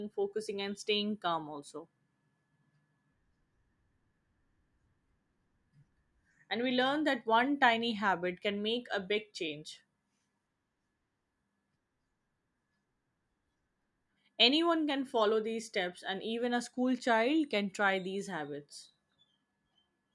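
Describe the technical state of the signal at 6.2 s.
At 6.2 s the speech signal is intact, with no audible dropout, distortion or other technical fault at that moment.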